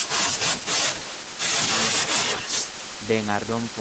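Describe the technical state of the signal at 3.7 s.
At 3.7 s the audio is intact, with no fault present, only the band limit near 8 kHz and the usual coding texture of the call path.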